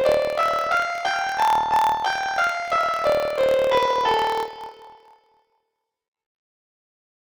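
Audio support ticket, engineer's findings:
Planar audio read as interleaved, whole clip. Sound pitched an octave high with a 38.3 Hz flutter. Likely deinterleave step: each 26.12 ms block of left-then-right samples read as alternating pairs, so every block plays twice at double speed. Spectrogram: harmonics shifted up 12 semitones, vertical striping every 26 ms. Waveform: discontinuities at each block boundary.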